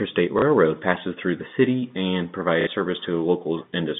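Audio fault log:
0.39 to 0.42 s and 2.61 to 2.67 s, packet loss with last packet repeated: audio failed to arrive for 30 ms and then 60 ms, which fits a 30 ms packet size. The receiver filled each gap by replaying the last good block of sound. The replays seldom line up with the pitch cycle. The longer gap repeats the block twice and gives a brief buzzy, robotic stutter near 33 Hz. Both gaps pass through the narrow telephone band of the G.711 line.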